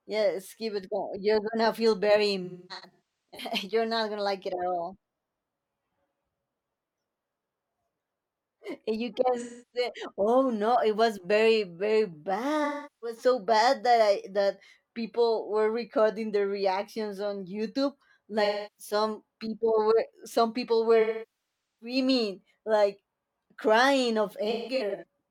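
Smeared, noisy, phasey patches break into the speech at 2.44 to 3.49 s, 9.39 to 9.89 s, 12.64 to 13.18 s, 18.44 to 18.93 s, 21.00 to 21.96 s and 24.50 to 25.04 s. This is AAC frame loss with concealment: the decoder lost frames and rebuilt the gaps from the last good spectrum. Losses run from about 0.3 to 0.8 s. At 2.44 s and 24.50 s the gaps are scattered, the longest lasting roughly 300 ms.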